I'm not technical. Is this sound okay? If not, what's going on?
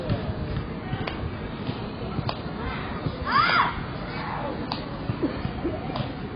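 No. The audio was most likely squeezed hard by AAC compression, a common way of shrinking files that throws away detail it judges you won't miss. Here it has cut too deep from start to finish. Everything above about 5.2 kHz is simply gone, so the sounds come across dull and muffled, with no crispness or air. What remains has a smeared, warbly, fizzy texture, most noticeable on hissy or lingering sounds.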